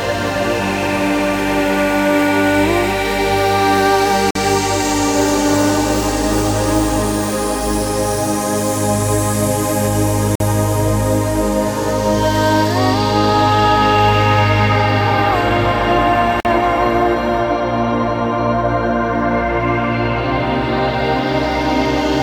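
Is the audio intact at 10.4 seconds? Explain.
No. A gap between chunks runs from 10.35 to 10.40 s, a hole of about 48 ms. The audio was delivered in 6-second chunks, and at this join silence was inserted between the end of one piece and the start of the next. Nothing is missing on either side, but the flow is interrupted, leaving a short hole.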